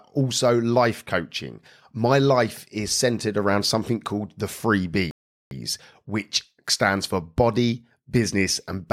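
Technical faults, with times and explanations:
5.11 to 5.51 s, rebuffering stall: the speech drops abruptly into dead silence for about 0.4 s, then picks up again on "which stands for body" with nothing skipped or repeated. The player had used up all the audio it had downloaded and had to wait for more data before continuing. Because playback freezes rather than jumping ahead, the gap adds time to the clip instead of losing any of the speech.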